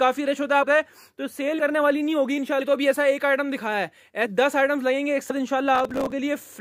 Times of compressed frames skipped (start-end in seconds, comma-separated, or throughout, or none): 0.62-0.64, 1.58, 2.60, 4.25, 5.29